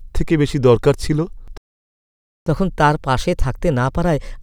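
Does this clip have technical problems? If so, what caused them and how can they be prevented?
Yes. Just after "বেশি দরকার ছিল", the speech cuts out mid-flow at 1.58 s and the output stays silent until 2.46 s, a gap of about 0.89 s, before resuming. This is a playback stall: the player most likely ran dry of buffered data, or its audio thread was blocked, so nothing reached the output until it recovered. A deeper playback buffer and a high-priority audio thread that never waits on network or disk would prevent it.

From 2.46 s to the end of the clip, the speech runs quick and sits higher, roughly two semitones up, because it plays at 1.15 times normal speed. This is catch-up at higher speed: after the stall, the player resampled its backlog faster to win back some of the lost time, and resampling raises pitch along with tempo. A time-stretching method that changes speed without shifting pitch, or catching up by gently dropping silences instead, would prevent it.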